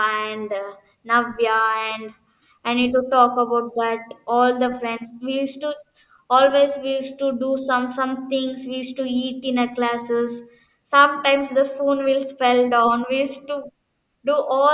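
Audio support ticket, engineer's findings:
No audible faults found in this speech recording.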